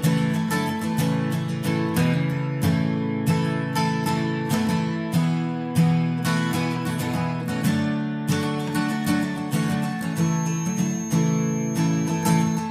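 From 10.08 s to the end at 12.71 s, a feedback whistle sits behind the sound: a thin, steady tone at 6.4 kHz, roughly 15 dB below the main signal, swelling and fading slowly in level without ever building up. The likely cause is a loudspeaker-to-microphone loop hovering right at the edge of feedback, sustaining that one frequency. On a spectrogram it shows as a narrow horizontal line at 6.4 kHz; the waveform barely changes.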